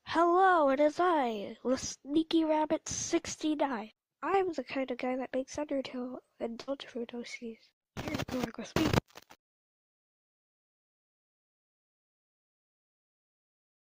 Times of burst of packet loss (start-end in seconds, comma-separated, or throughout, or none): 6.61-6.70